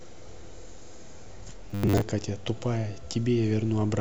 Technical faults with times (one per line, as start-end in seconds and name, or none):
1.70-2.01 robotic sound from repeated short buffers